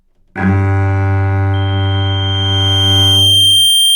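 From 1.53 s to the end, a single 3.2 kHz tone swells over roughly two seconds into a squeal that sits a few decibels above the sound: loudspeaker feedback squeal, where the microphone hears its own loudspeaker and the loop gain at that frequency exceeds one.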